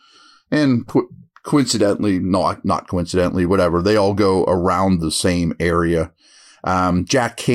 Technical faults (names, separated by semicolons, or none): none